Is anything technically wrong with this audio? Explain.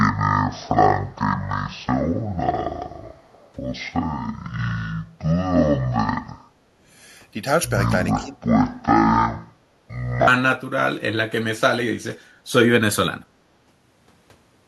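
Yes, the speech has three faults.

From 0.0 to 10.27 s the section plays at the wrong speed, half speed, likely from a wrong playback clock. It sounds slow and roughly ten semitones deeper. Speed and pitch shift together, unlike a pitch-only shift.

From 3.10 to 3.52 s there is an echo leak: a very faint copy of the speech returns about 356 ms late, likely from an echo canceller letting loudspeaker sound through. That long delay separates it from room reverberation.

From 8.15 to 8.38 s the speech is suppressed in double talk. It dips by roughly 10 dB for about a fifth of a second, likely because the echo canceller turned down both talkers. It is a brief dip while both sides talk, not a full dropout.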